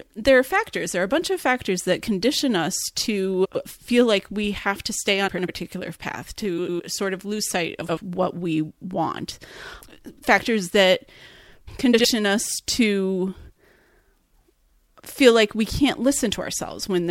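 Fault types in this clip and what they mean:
Frames out of order: two neighbouring chunks got swapped before decoding, so short stretches play with their halves exchanged. That gives a garbled flutter at 3.45, 5.28, 6.58, 7.81 and 11.93 s. Swapped blocks run about 50 to 105 ms.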